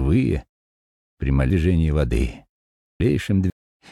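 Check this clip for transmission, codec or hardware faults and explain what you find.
One fault: chunks out of order from 1.50 to 3.50 s. A 500 ms chunk arrived three chunks late, so the audio jumbles, with three hard joins.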